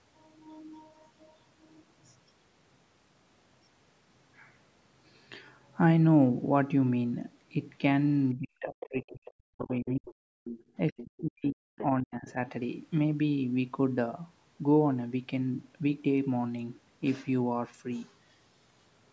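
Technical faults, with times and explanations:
8.35–10.15 s, 10.87–11.77 s and 12.02–12.38 s, speech suppressed in double talk: with both sides talking at once, the echo canceller likely could not tell the talker from loudspeaker echo and turned everything down, so the voice dips by up to roughly 40 dB.
8.8–9.0 s, 9.62–10.14 s, 10.44–10.62 s, 10.98–11.04 s and 11.78–11.84 s, other side's voice leaking through: residual loudspeaker echo likely slipped past the canceller into the microphone, so short, faint scraps of a second voice surface well below the main talker.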